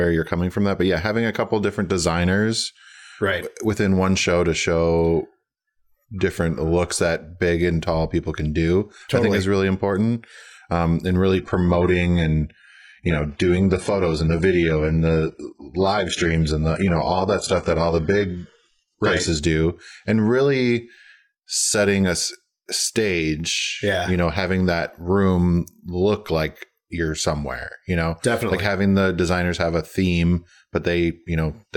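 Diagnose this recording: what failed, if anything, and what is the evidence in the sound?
From 11.38 to 19.38 s, after "and really", speech abruptly loses everything above 11.1 kHz with no gap. This is an adaptive stream at a lower bitrate, the network dropping to a much leaner codec setting.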